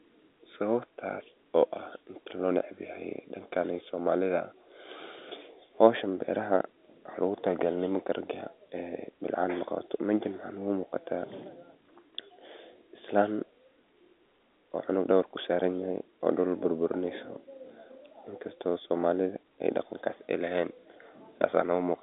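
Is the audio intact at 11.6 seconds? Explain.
Yes, the audio is intact at 11.6 seconds, with the speech carried cleanly through the narrow telephone band of G.711 coding and no fault at that moment.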